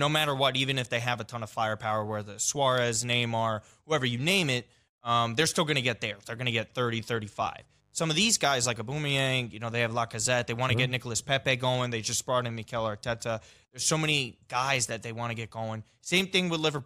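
From 6.04 to 8.39 s, between "still going to get" and "guys like", a faint mains buzz sits about 40 dB below the speech. Switching spikes on the 50 Hz supply add harmonics reaching into the kilohertz range, so it sounds raspy rather than like a smooth, low hum.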